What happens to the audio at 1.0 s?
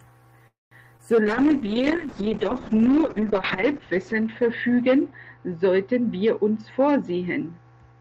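At 0.97 to 1.01 s there is a short concealed packet loss. About 20 ms of the speech stream arrived too late or not at all. The decoder papered over the gap, synthesising roughly 13 ms by extending the preceding sound, repeating its pitch if voiced or shaping noise if not, then crossfading back into the received signal. The result is a brief smear or wobble, and a short consonant there may drop out.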